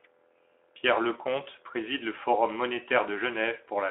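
No technical faults are audible.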